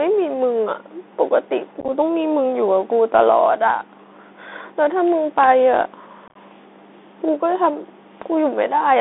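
Speech carried over a Bluetooth CVSD headset codec, with the telephone-band sound of that link throughout: the audio sits between about 250 Hz and 3.6 kHz. The 64 kbps one-bit delta coding cannot keep up with loud, bright moments, so sibilants turn scratchy and a grainy hiss sits under the voice. Unconcealed Bluetooth headset packet loss appears twice. From 1.80 to 1.90 s, about 37 ms of audio drops out in short holes across roughly 80 ms, the longest about 11 ms. From 6.28 to 6.37 s, about 56 ms is missing within 75 ms, the longest gap about 22 ms. Both bursts sound like rough, chopped crackle with abrupt edges, consistent with around ten to fifteen lost voice packets replaced by silence.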